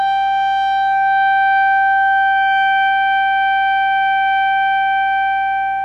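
Throughout the music, a screen or video cable is coupling into the audio path, producing video or display buzz: a steady 60 Hz buzz at the picture's field rate, topped with gritty hash, sitting roughly 35 dB below the music.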